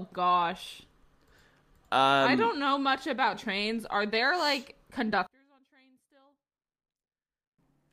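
One stereo channel has likely been flipped in polarity from 5.27 to 7.59 s, just after "there like", so that when the two channels are summed to mono the centred speech cancels itself out. This one channel inverted fault drops the level by about 34 dB. The speech nearly vanishes, leaving only a faint residue of whatever differed between the channels, until full level returns at 7.59 s.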